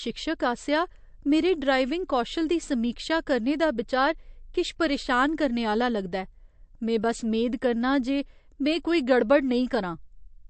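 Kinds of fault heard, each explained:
MP3 compression, throughout: the bit-starved encoder cuts everything above 8.3 kHz and drops weak frequency lines, with plainly audible damage, likely from roughly 48 kbps MP3.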